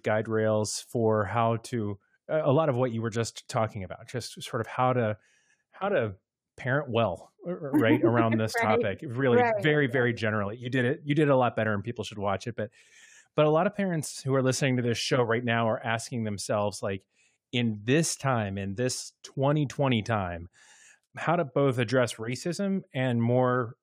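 No technical faults are audible.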